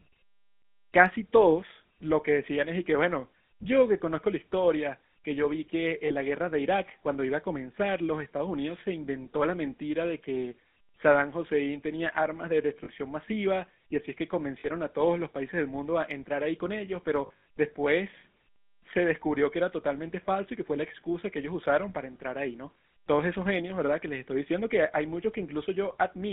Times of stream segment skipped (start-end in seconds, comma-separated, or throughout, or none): none